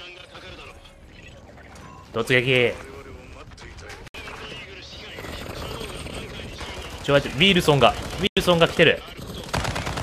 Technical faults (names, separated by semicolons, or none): digital broadcast dropout